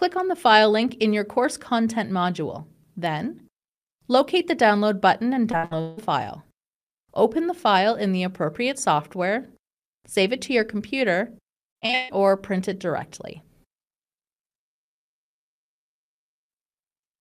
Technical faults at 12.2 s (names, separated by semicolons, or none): repeated packet loss (robotic sound)